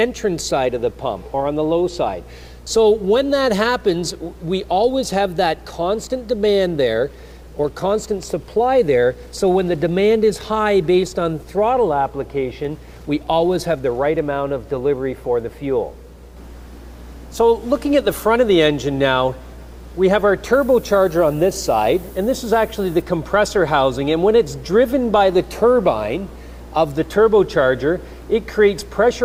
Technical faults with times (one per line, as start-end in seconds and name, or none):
20.53-23.02 low bit depth with noise shaping